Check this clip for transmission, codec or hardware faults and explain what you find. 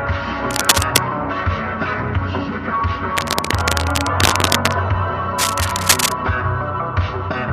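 There's one recurring problem: cable scratch noise, in three bursts at 0.51 to 0.98 s, 3.17 to 4.73 s and 5.38 to 6.12 s. It's a ragged rustling scratch, a little louder than the audio in the first burst and about level with it later, likely a worn cable or connector whose contact keeps shifting.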